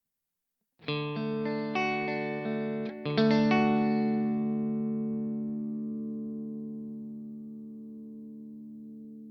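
No technical faults can be heard anywhere in this audio; the signal stays steady and intact throughout.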